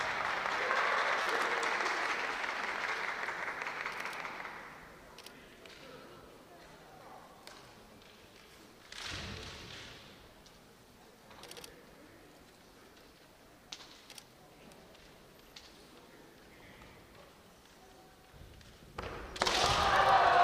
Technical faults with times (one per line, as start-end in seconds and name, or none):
1.23-1.26 repeated buffer
5.67 repeated buffer